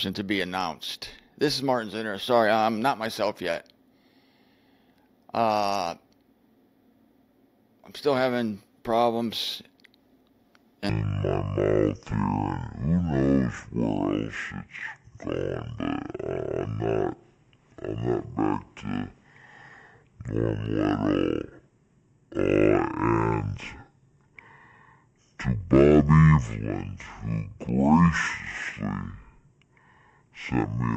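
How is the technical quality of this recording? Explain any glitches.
The recording has one clear glitch: a section at the wrong speed. From 10.9 s to the end, the audio plays at roughly half speed (0.518x), so everything drags and drops by about ten semitones at the moment of the switch. This most likely comes from playback or editing against the wrong clock, which slows timing and pitch together. On a spectrogram, every harmonic band steps down sharply at 10.9 s, and events stretch to about twice their width. The waveform's envelope and cycles likewise spread out.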